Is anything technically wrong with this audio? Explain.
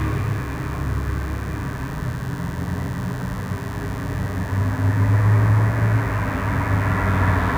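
Yes. A mains buzz runs through the whole clip, sitting roughly 25 dB below the sounds. Sharp switching spikes, likely from a dimmer, rectifier or unshielded line, enter twice per 50 Hz cycle, so they repeat every 10 ms and produce a raspy, steady buzz. On a spectrogram this appears as evenly spaced horizontal lines at multiples of 50 Hz, reaching up into several kHz. The waveform shows regular narrow spikes at 100 per second.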